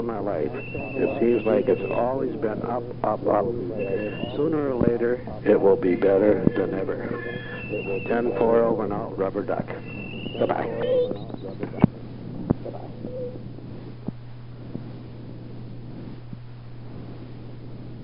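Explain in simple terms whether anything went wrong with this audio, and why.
Nothing went wrong with this recording of sounds. Listening closely, there is no moment where the audio breaks, jumps or changes in a way that points to a technical problem.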